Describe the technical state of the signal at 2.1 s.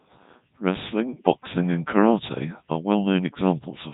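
At 2.1 s the speech is carrying Codec 2 vocoder damage, present across the whole clip. The decoder rebuilds the voice from sine waves driven by pitch, voicing, energy and a spectral envelope, so the original waveform is gone, and the heavy buzzy, robotic quality fits the codec's highest 3.2 kbit/s mode. A spectrogram shows nothing above 3.8 kHz and unnaturally regular harmonic lines, and the waveform looks smooth and periodic rather than natural.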